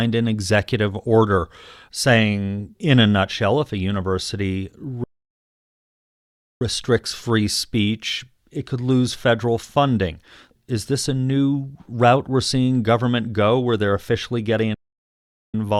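Two playback stalls: after "nutshell if a university" at 5.04 s the speech drops to silence for 1.57 s, resuming at "free speech it could", then again after "where they're officially getting" at 14.74 s for 0.8 s, likely the player starving for data.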